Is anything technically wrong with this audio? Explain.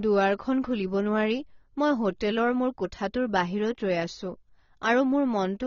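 Yes. Throughout, the speech sounds dull and smeared, with nothing above 7 kHz and a warbling texture, likely from heavy AAC compression at a low bitrate around 24 kbps.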